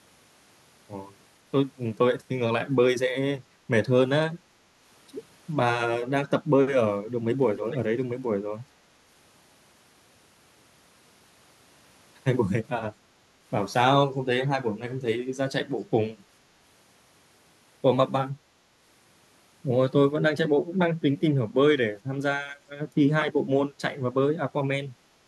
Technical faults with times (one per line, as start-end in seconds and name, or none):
7.56-7.79 echo leak
13.14-13.19 background gated by the echo canceller
25.20-25.27 background gated by the echo canceller